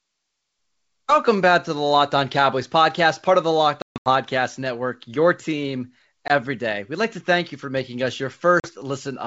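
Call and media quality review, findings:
Hard-edged silent holes, with sound resuming slightly distorted, at 3.82–4.09 s (220 ms lost, longest gap 140 ms), at 6.28–6.31 s after "your team", and at 8.60–8.72 s after "you for making us". Packet loss on the ADPCM call. Silence fill desyncs the decoder's predictor and step size, which then re-adapt.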